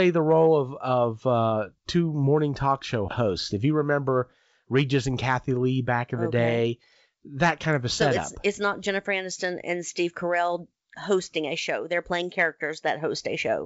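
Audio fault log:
No faults heard.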